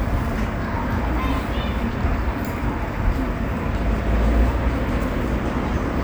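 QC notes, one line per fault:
No faults heard anywhere in the audio.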